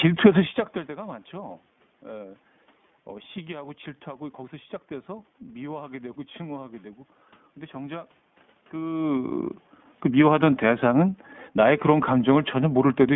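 Speech running through the iLBC codec for its whole length, with plainly audible coding damage. The line is confined to roughly 150 Hz to 3.5 kHz, and each 20 ms frame is coded independently, giving a rough, synthetic texture that fits the 15.2 kbps mode. Background room noise is present.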